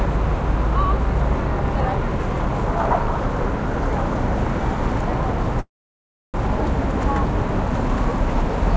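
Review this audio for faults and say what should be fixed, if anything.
A call audio freeze runs from 5.60 to 6.36 s. The sound stalls and is briefly stretched into a fading buzz, then about 0.66 s is near silence, likely because packets were delayed and the jitter buffer ran dry. Nothing is lost; playback resumes where it stopped, now 0.74 s later. On a spectrogram this shows as a short smeared tail followed by an empty column, and the waveform goes flat. Through the call path, content ends at 8 kHz, which fits G.722 at 64 kbps. A larger or adaptive jitter buffer on a more stable network path would prevent it.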